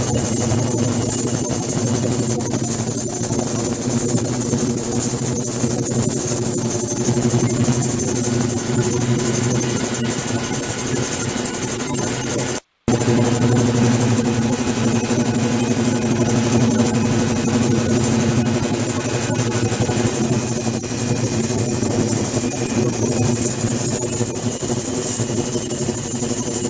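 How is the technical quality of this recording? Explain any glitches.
Nothing stood out on listening: the sound comes across as a normal call-path recording, with its content limited to below about 8 kHz as a wideband call codec such as G.722 would produce, and no glitches to point to.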